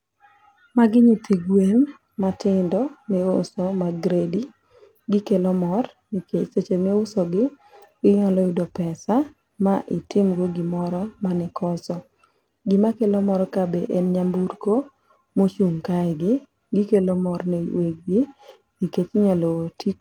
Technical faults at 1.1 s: none

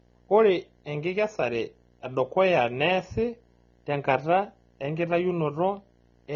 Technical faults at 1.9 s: video or display buzz; AAC compression

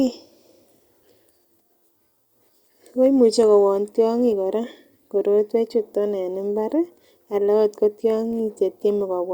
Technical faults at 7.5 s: none

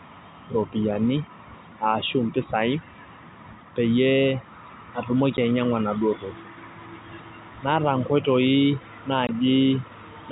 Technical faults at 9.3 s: packet loss filled with silence

